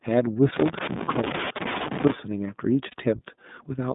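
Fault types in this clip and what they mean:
iLBC codec: A narrowband VoIP codec coding each 30 ms frame on its own, here at 13.33 kbps, which strips everything outside a roughly 150 Hz to 3.7 kHz line band. Throughout the clip the speech sounds plainly coded, dull, slightly rough and synthetic.
Loose connector crackle: A worn or dirty contact was making and breaking as it moved, chopping the signal on and off. From 0.56 to 2.12 s this comes through as an irregular burst of scratchy crackle laid over the speech.
Lost iLBC frames: Single 30 ms packets went missing and the decoder covered each gap by repeating the last pitch cycle blended with noise. At 1.05 s and 2.91 s the speech briefly smears into a held, faintly buzzy vowel, then recovers almost immediately.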